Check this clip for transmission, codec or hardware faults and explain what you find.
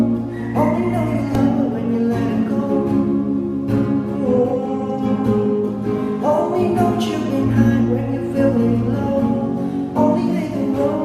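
One fault is present, a repeated buffer at about 1.35 s. New audio arrived late, so the device replayed its last tiny block several times, which fits a buffer of about 1.33 ms. The result is a click or brief buzz, with a few milliseconds of audio lost. Unlike a dropout, the gap is filled with repeated material rather than silence.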